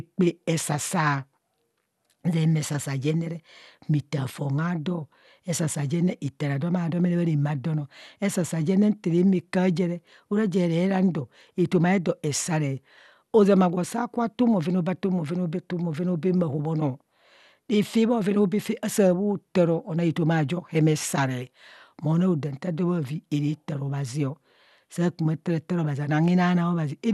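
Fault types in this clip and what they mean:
MP2 compression, throughout: the speech sounds dull and gurgling, with a granular roughness and nothing above about 12.2 kHz. This is likely MPEG Layer II coding at a low rate, consistent with roughly 80 kbps. That codec divides the signal into 32 sub-bands and shares out a tight bit budget, so the top bands are dropped entirely while the remaining ones are quantised coarsely and flicker in and out, giving the plainly audible grainy texture.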